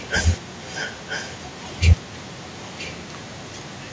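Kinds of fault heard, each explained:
Echo leak: from 0 to 0.1 s and again from 0.39 s to the end, a second copy of the speech trails the original by about 0.97 s, only a little quieter than the direct sound. This is likely a far end playing the call on a loudspeaker whose echo canceller failed to remove what its microphone picked up, so the voice came back nearly a second late and overlaps the live speech almost continuously.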